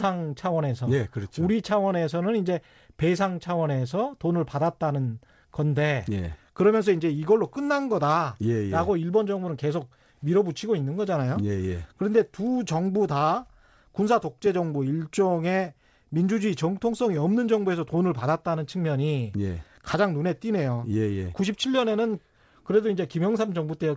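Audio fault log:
throughout, clock drift between sender and receiver: small, unevenly spaced hiccups and a slightly unsteady pace, because the sender's clock runs about 1.5% slow and the jitter buffer keeps running low.
0.72–23.53 s, repeated timing corrections: the speech drags slightly, at 99% speed, with short repeated slivers adding roughly 300 ms, as the receiver pads the slower stream to stay in step.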